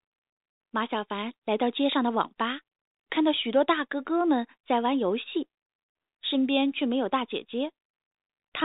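Nothing faulty can be heard anywhere in this speech.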